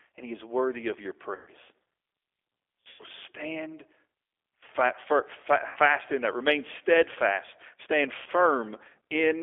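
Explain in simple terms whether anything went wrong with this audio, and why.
Two things went wrong. The first affects the whole recording: it has passed through the G.729 codec, a compact phone-call codec that doesn't store the sound itself. It stores a rough recipe for it: a model of the throat's shape, the pitch, and a few pulses, and the far end rebuilds the speech from that. The line also keeps only roughly 300 Hz to 3.5 kHz, so the speech sounds narrow and muffled, with a plainly rough, slightly synthetic edge.

The second is VoIP packet loss concealed by the speech codec, which happens four times. Chunks of data went missing at 1.35–1.50 s (about 120 ms, right after "is worthy of your"), 2.89–3.03 s (about 100 ms), 5.67–5.78 s (about 80 ms, just before "in that"), and 8.18–8.28 s (about 80 ms). Instead of silence, the decoder keeps repeating its last pitch and throat shape while turning the volume down. 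Each gap therefore comes out as a stretched, buzzy or fading sound. Because each rebuilt piece depends on the one before, the speech stays weak or smeared briefly after the data returns.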